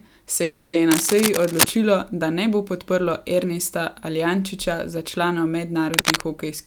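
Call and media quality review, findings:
Call audio freeze, 0.43–0.76 s: last sound stretched into a fading buzz for about 300 ms, then resumes where it stopped, nothing lost. Likely jitter buffer underrun from delayed packets; playout now runs about 300 ms later.

Cable scratch noise, 0.91–1.72 s (after "se je", before "da ne bo podprlo") and 5.94–6.23 s: dense, uneven scratching bursts roughly as loud as the speech. Likely a worn cable or connector being moved, its contact resistance fluctuating rapidly.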